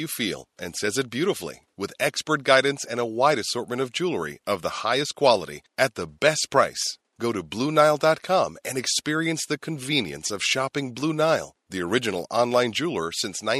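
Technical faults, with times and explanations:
No technical faults are present in this speech recording; the only other sound is the room's own background noise, sitting about 53 dB below the speech.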